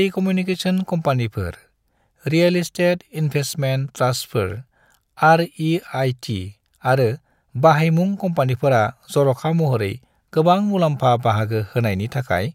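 A stereo channel likely cut out briefly from 0.54 to 0.60 s, a one channel drops out fault. Once both sides are folded to mono, the speech abruptly falls by about 6 dB for those 57 ms, a short, sudden dip in loudness before recovering.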